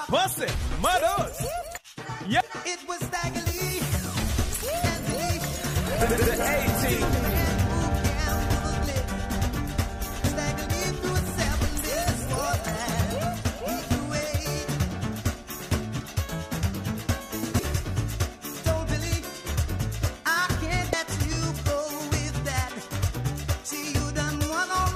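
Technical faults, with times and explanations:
9.55 s, 14.19 s, 17.58 s and 20.92 s: damaged data in a compressed stream. Corrupted bytes in the encoded file made the decoder misread a frame, lose sync and hunt for the next valid header. Each event is a brief chirp or blip under 20 ms.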